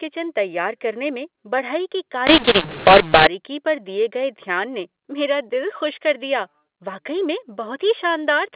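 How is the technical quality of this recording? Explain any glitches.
The recording is narrowband telephone speech, limited to 4 kHz as expected for G.711 mu-law coding, with one glitch. From 2.27 to 3.27 s, mu-law and A-law are mixed up: mu-law-coded samples are decoded with the A-law curve, so levels come out scrambled. For that second the speech turns harsh and distorted, and quiet moments fill with hiss.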